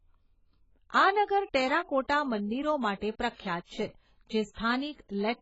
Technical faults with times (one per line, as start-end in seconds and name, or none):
0.00-5.41 AAC compression